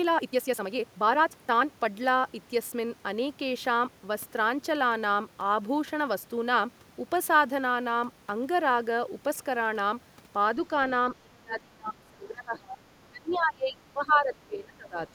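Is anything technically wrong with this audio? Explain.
Yes. Speech suppressed in double talk occurs from 11.17 to 12.79 s and again from 13.09 to 14.99 s. When both ends talked at once, the echo canceller likely mistook the talker for loudspeaker echo and turned the microphone down. The voice drops by roughly 25 dB.

Other side's voice leaking through appears from 13.3 to 13.38 s. The far end's voice, played on the talker's loudspeaker, was likely not fully cancelled. A brief scrap of it comes through, roughly 25 dB below the talker's speech.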